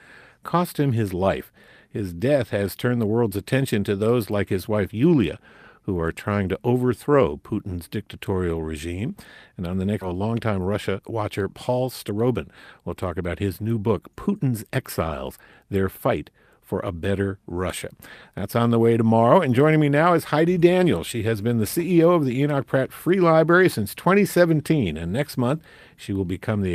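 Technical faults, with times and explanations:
10.01–10.03 s, skip ahead: about a second of speech is missing, with no fill. The waveform splices directly across, and the spectrogram shows an abrupt discontinuity.
10.13–14.79 s, jitter buffer speed-up: the buffer trims excess delay by cutting pitch periods, running 110% speed at unchanged pitch. Harmonics stay level on the spectrogram, but syllables compress.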